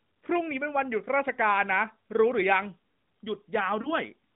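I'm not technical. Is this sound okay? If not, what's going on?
No, there's one glitch near the end: lost AMR speech frames. Around 3.82 to 3.92 seconds the speech briefly dips and warbles, which sounds like a single lost frame on the phone line. The decoder fills that gap by repeating the last good sound, more quietly.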